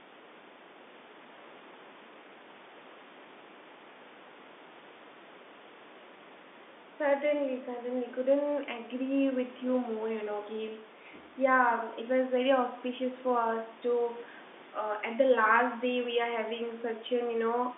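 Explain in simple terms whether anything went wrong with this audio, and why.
Nothing went wrong here.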